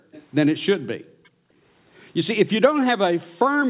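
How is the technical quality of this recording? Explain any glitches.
The recording has two recurring glitches: the background is gated by the echo canceller twice, and there are two short bursts of echo leak, all within a speech signal that is band-limited to 4 kHz, consistent with a narrowband G.711 A-law call path.

Background gated by the echo canceller, 0.00 to 0.12 s and 0.97 to 1.61 s: the room tone drops out abruptly, by as much as about 40 dB, for roughly a tenth of a second at the start and about half a second in the second span. The canceller decided far-end audio was playing and clamped the microphone gain hard, then released it. The result is a pumping effect, with the ambience vanishing into near-silence and snapping back.

Echo leak, 0.12 to 0.25 s and 1.24 to 1.29 s: a faint, delayed copy of the speech appears, trailing the original by 456 ms. It sits at about 25 dB below the speech in the first instance and about 40 dB below in the second, very brief one. 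This is likely residual loudspeaker echo that the far side's echo canceller failed to fully subtract and then sent back.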